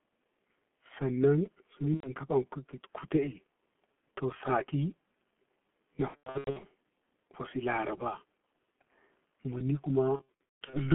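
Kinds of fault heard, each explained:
G.723.1 codec: the whole recording is squeezed into a 200 Hz to 3.4 kHz telephone band at about 6.3 kbit/s, so it sounds muffled and hoarse with smeared consonants throughout, unlike brief dropouts.
VoIP packet loss concealed by the speech codec: at 1.94, 6.08 and 10.16 s the decoder fills lost 30 ms frames by stretching the last sound into fading buzz, then recovers slowly.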